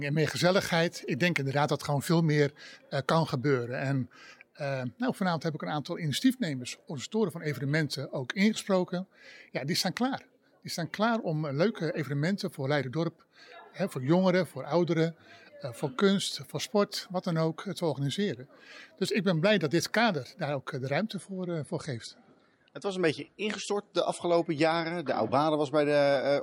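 At 21.13 s the audio switches abruptly to an adaptive stream at a lower bitrate and stays there until the clip ends at 26.42 s. Everything above 11.2 kHz vanishes and codec artefacts thicken, a change that points to the player stepping down from about 128 kbit/s MP3 to about 48 kbit/s after the connection slowed. Unlike a dropout or packet loss, there is no gap or glitch, only a clean, sustained step down in quality.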